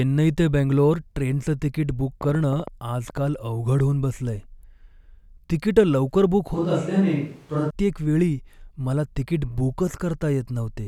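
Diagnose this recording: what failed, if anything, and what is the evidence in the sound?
A burst of ticking sits over the speech from 2.21 to 3.18 s: around ten sharp, similar clicks at an uneven spacing, about 8.3 per second, peaking roughly 5 dB above the speech. This train of clicks points to the analogue wiring or interface stage, likely interference pulses or a failing connection.

From 6.54 to 7.70 s the speech abruptly turns roomy, hollow and thinner in the bass, then snaps back. The level stays about the same, but room noise rises to about 35 dB below the speech. This is a switch to a distant microphone, likely after the close microphone's feed dropped out.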